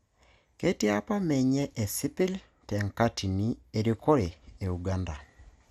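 MP2 compression is audible throughout the clip. The speech sounds dull and carries a gurgling, granular roughness, and nothing is present above 15.8 kHz. The likely cause is MPEG Layer II coding short of bits. The encoder splits the signal into sub-bands, shuts off the highest ones and quantises the rest coarsely, so fine detail flickers in and out. The damage is plainly audible and fits a rate of around 80 kbps.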